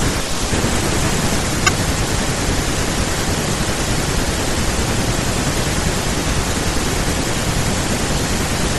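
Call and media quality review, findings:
Lossy encoding, likely MP3 at a rate consistent with about 64 kbps, throughout the speech. The encoder starves the spectrum, so the top end is cut and weak frequency components flicker between frames. Plainly audible watery, swirly coloring; sibilants chirp, onsets smear.

Damaged data in the compressed stream at 1.65–1.69 s, 5.20–5.24 s and 7.84 s. Corrupt bytes make the decoder misread frames and lose sync until it finds the next header. Heard as brief chirps, squawks, clicks or short holes.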